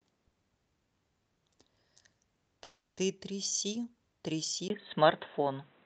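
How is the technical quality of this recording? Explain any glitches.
The recording has two glitches.

From 2.63 to 3.00 s there is a call audio freeze. The sound stalls into a fading buzz or hiss for about 0.34 s, then resumes where it stopped. Nothing is lost. The likely cause is late packets emptying the jitter buffer.

At 4.68 s, the input likely switched to a poorer device. A 20 ms silence is followed by dull, boxy sound with nothing above 4 kHz, a level shift of roughly 5 dB, and new background noise about 35 dB down. This lasts until the end.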